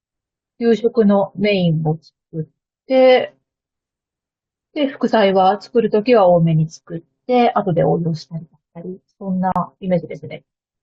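At 9.52 s the speech drops out for about 37 ms, ending at 9.56 s: a gap at a join of encoded pieces. Two separately encoded segments were spliced without removing the encoder's leading delay and final-frame padding, so that silence remains. It sounds like a tiny stutter, after which the speech resumes where it stopped. On a waveform it is a flat run with smeared edges. On a spectrogram it is a thin vertical blank band across all frequencies.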